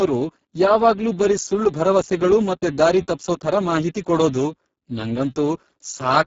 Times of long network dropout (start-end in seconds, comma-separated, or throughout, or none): none